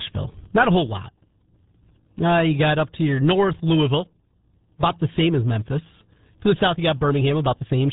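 Speech run through the RealAudio 14.4 codec for its whole length, at a data rate that fits the 8 kbit/s RealAudio 1 dial-up design. Nothing above about 3.8 kHz survives, so the voice is dull and muffled, and the heavy coding damage adds a gargly, watery texture.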